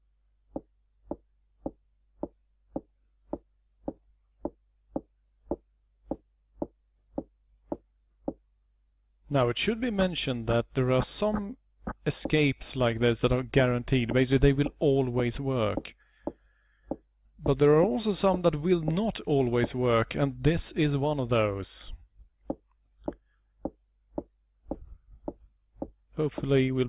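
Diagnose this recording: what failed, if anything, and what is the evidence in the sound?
No faults can be heard.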